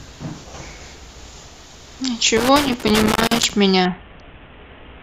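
Loose connector crackle from 2.37 to 3.50 s in this speech recording: a worn contact making and breaking chops the signal into irregular scratchy bursts. A Bluetooth SBC bit pool drop from 3.85 s to the end dulls the treble and adds gritty quantisation noise, which fits the bit pool falling from 28 to about 5, roughly 54 kbps, on a congested link.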